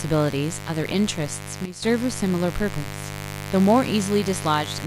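A raspy mains buzz runs through the whole speech clip, sitting about 10 dB below the voice. Sharp switching spikes from a dimmer, rectifier or poorly shielded line enter the signal twice per 50 Hz cycle, so the hum is rich in harmonics climbing into the kilohertz range. On a spectrogram it shows as a comb of evenly spaced horizontal lines, 50 Hz apart, unbroken from start to finish. The waveform carries a fine, spiky ripple beneath everything.

At 1.65 s a sudden gain jump cuts the level by 12 dB in a single step, and it stays down until 1.82 s before snapping back. The likely cause is a digital gain setting or bit shift applied instantly instead of ramped. Speech and the background buzz drop together, then return together. The waveform shows an abrupt, square-edged dip in the envelope lasting about 170 ms, and the spectrogram shows a uniformly dimmer vertical band bounded by sharp edges.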